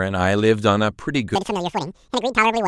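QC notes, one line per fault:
1.35–2.68 s: audio read two samples at a time (double speed). From 1.35 s on, the speech suddenly runs twice as fast and jumps a full octave, 12 semitones, up. Adjacent samples are being taken as one frame, as if it were stereo or wider samples.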